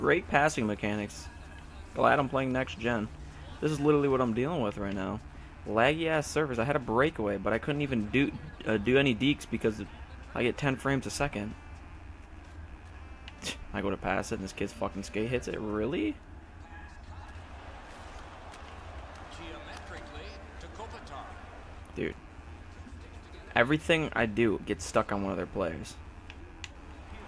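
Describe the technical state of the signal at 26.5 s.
At 26.5 s the signal is intact, with no audible fault at that moment.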